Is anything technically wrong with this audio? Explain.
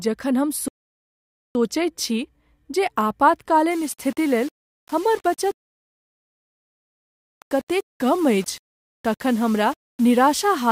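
Yes, there are two kinds of fault. Rebuffering stalls occur from 0.68 to 1.55 s and from 5.56 to 7.39 s: the player exhausted its downloaded audio and halted until more arrived, so the speech drops to silence and then resumes exactly where it stopped, adding about 0.87 s and 1.82 s.

From 3.71 s to the end, the speech was likely reduced to low bit depth without dither, around 6 bits with plain rounding. The rounding error tracks the signal, sitting only about 25 dB below it, so quiet passages sound gritty and grainy, and the softest moments sputter or vanish.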